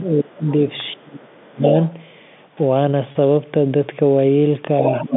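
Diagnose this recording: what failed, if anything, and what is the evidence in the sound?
The speech dips sharply from 0.13 to 0.47 s, from 0.95 to 1.72 s and from 5.04 to 5.16 s, falling by roughly 30 dB at its deepest (about 15 dB in the last one). This is speech suppressed in double talk at the call-processing stage. The echo canceller likely could not separate the local talker from simultaneous loudspeaker echo and attenuated everything.

A second, fainter voice comes through at 0.47 to 0.52 s, 1.27 to 1.46 s, 1.89 to 1.94 s and 4.89 to 5.03 s. It sits about 25, 35, 35 and 10 dB below the speech. This is the other side's voice leaking through, likely because the echo canceller left residual loudspeaker pickup in the microphone path.

From 3.12 to 3.15 s a brief held, buzzy tone replaces about 30 ms of speech, which fits a single lost packet on the network. This is packet loss with pitch repetition: the receiver concealed the gap by repeating the last pitch period until fresh audio arrived.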